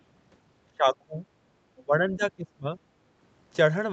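From 0.72 to 1.18 s, and again from 1.82 to 2.69 s, the speech sinks in patches by as much as about 25 dB. This is speech suppressed in double talk, likely because the echo canceller heard both sides at once and turned the talker down along with the echo. Between 1.77 and 1.82 s a faint second voice, roughly 30 dB below the speech, slips through. This is the other side's voice leaking through, likely as loudspeaker echo the canceller left behind.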